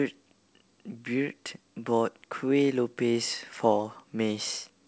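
No faults found; the speech has passed through a call path whose wideband coding leaves nothing above 8 kHz, consistent with G.722.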